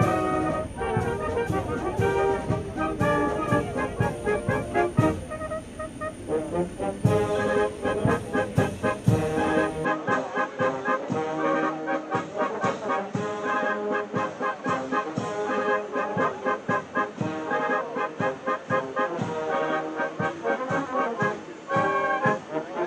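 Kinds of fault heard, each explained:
Input switched to a poorer device: from 9.85 s the sound dulls, losing everything above 8.2 kHz. Level holds steady, with faint new noise. Likely cause: another microphone.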